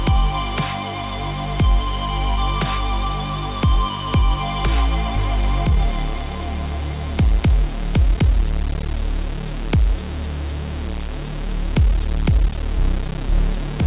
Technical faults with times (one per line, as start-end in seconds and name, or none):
none